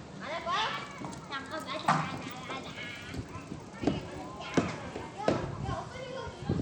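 Bluetooth SBC compression runs throughout: the treble thins and flickers, and a gritty, aliased noise rides on the everyday sounds. The likely cause is a small bit pool starving SBC's upper sub-bands, consistent with a rate near 96 kbps.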